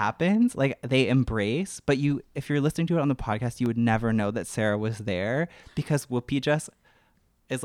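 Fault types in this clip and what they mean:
Block of digital silence: a single sharp tick at 3.66 s, where the speech drops to silence for about 0.73 ms and returns with no fade. A gap that short, 32 samples, points to the program missing its output buffer deadline for one small block.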